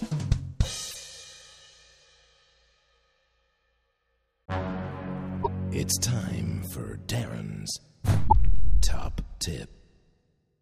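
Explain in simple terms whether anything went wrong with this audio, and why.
Something did go wrong: there's damaged data in a compressed stream, heard three times, from 0.88 to 0.96 s, 5.40 to 5.48 s, and 8.24 to 8.33 s. Each one is brief, under a tenth of a second. At those spots some of the stored bytes got corrupted, so the decoder couldn't make sense of that stretch. It lost its place while it hunted for the next readable chunk and got back in step.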